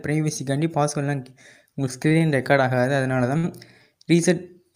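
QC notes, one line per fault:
2.07–2.28 s, short stall from a late packet: a cluster of three. The sound hangs briefly, about 32, 19 and 18 ms of stretched fill, because the jitter buffer ran dry and the receiver held the last bit until the packet turned up. Nothing's lost, it just drags.
2.75–2.82 s, short stall from a late packet: a quick 16 ms hold, a faint buzz or dip.
3.37–3.45 s, short stall from a late packet: the longest, 61 ms stretched.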